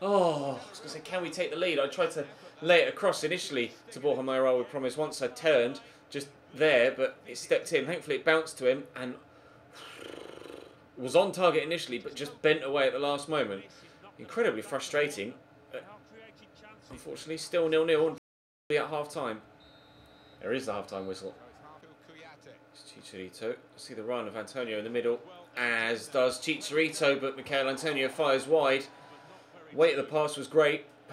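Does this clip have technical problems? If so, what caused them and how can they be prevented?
Yes. A playback stall occurs from 18.18 to 18.70 s: the sound stops mid-flow for about 0.52 s, then carries on. The player likely ran out of buffered data or had its playback thread blocked. Larger buffers and a higher-priority audio thread would prevent it.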